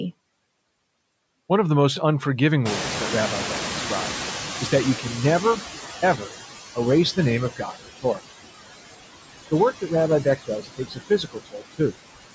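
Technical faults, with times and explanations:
Throughout: noise suppressor artifacts. The background is pulled down by about 19 dB frame by frame, so leftover noise dips between phrases.
2.65–6.31 s: noise suppressor catching up. Room noise jumps by about 23 dB near 2.5 s. The suppressor's estimate lags for 3.66 s, letting noise through before it sinks by about 14 dB.
6.02–6.33 s, 7.50–8.21 s, 10.46–11.96 s: speech cut by the noise suppressor. Parts of the speech are mistaken for noise and dropped by up to about 14, 17 and 21 dB. Roughly 150 ms, 300 ms and 700 ms of speech sound swallowed.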